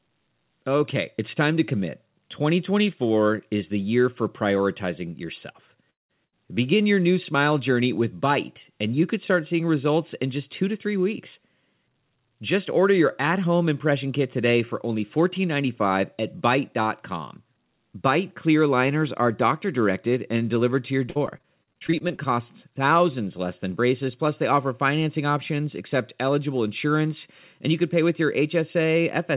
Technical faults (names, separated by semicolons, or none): short concealed packet loss; long network dropout; burst of packet loss; repeated packet loss (robotic sound)